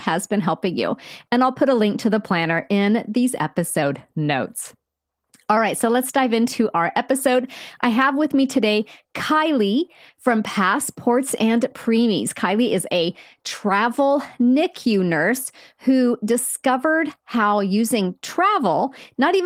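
Speech, where from 3.83 to 5.57 s playback abruptly slows by 5.8% and drops about a semitone (104 cents), likely a drift correction step. Unlike wow, it's one flat step that snaps back rather than a wavering pitch.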